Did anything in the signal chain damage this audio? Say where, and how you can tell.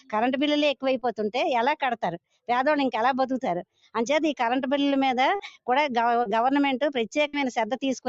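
Yes. A noise suppressor applied to music or sounds, a call-processing stage, works on the whole clip. It treats held tones, ambience and decays as noise and pulls them down while attacks pass, so the level pumps by around 5 dB and sustained parts thin out and flutter. The suppressor is built for speech and keeps re-judging steady material as background, which is why the gain keeps moving. The codec's 8 kHz bandwidth is audible alongside this.

Sound cut by the noise suppressor is clearest at 2.27 to 2.49 s and again at 3.72 to 3.95 s. In each window a sustained or fading sound suddenly sinks, by as much as about 21 dB at the deepest point, across a span of a couple of hundred milliseconds, cutting its decay short. The suppressor classified that passage as noise and applied far more attenuation than to the surrounding audio, rather than the milder swing heard elsewhere.

Short concealed packet loss, a network fault, shows up at 0.99 to 1.03 s, 5.35 to 5.41 s and 6.23 to 6.27 s. 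Each is a brief smear or wobble lasting 20 ms, 40 ms and 20 ms respectively. That audio never arrived at the decoder in time, so the receiver extrapolated the preceding sound to fill the gap and crossfaded back into real signal, leaving a small glitch rather than silence.

A burst of packet loss occurs at 7.27 to 7.35 s, again on the network side. About 60 ms is missing, heard as the last sound being stretched into a held buzz or fading hiss before the audio resumes further along. Several consecutive packets were lost or arrived too late, and the concealment continued the prior sound while fading it down, so whatever happened in that 60 ms is simply gone.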